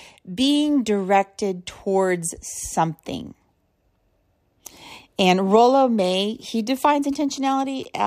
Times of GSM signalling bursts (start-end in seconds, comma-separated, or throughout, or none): 6.89-8.00